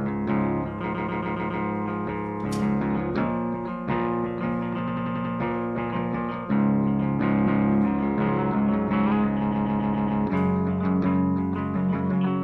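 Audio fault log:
0.89–1.58 s, 4.83–5.30 s, 7.43–7.67 s and 9.48–10.17 s, repeated frames: a compressed chunk gets replayed (139 ms five extra times, 93 ms five times, 232 ms once, 139 ms five times), so it stutters and stretches the clip.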